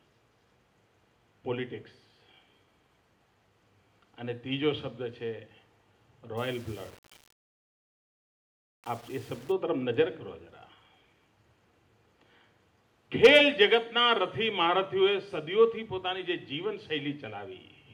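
From 6.37 to 9.52 s the sound turns grainy, with an error that rises and falls with the signal rather than sitting as a separate noise floor. Its level is roughly 30 dB below the signal. This is likely low bit depth without dither. The audio was rounded to a coarse grid with no added noise to decorrelate the error, which fits 7-bit rounding. Any detail smaller than one step is lost or flips between neighbouring steps.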